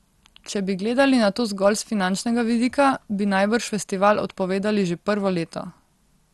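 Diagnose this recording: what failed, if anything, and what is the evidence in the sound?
The codec stage is at fault throughout this speech: it sounds dull, with nothing above 12.2 kHz, and a gurgling, granular roughness as upper bands drop in and out. That flicker, rather than a steady cut-off, points to MP2 compression, likely starved at around 64 kbps.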